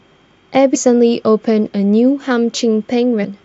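At 0.74 s and again from 3.23 to 3.25 s the speech jumps forward, a sign of compressed frames skipped: whole blocks of encoded audio never reach the output, so playback resumes further along. The first gap drops roughly a fifth of a second, the second around 0.4 s, which points to something like ten and fifteen frames lost.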